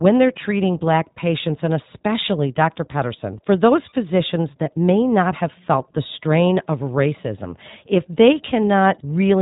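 The whole speech clip carries iLBC codec damage, plainly audible. Nothing passes above about 3.8 kHz. Each 20 ms frame is coded alone, leaving a rough, synthetic edge. This fits a 15.2 kbps mode.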